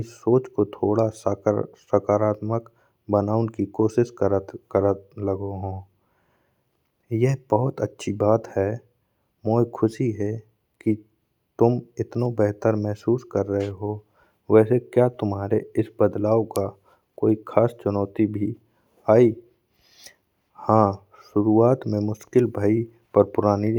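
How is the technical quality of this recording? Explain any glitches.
No technical glitches are audible.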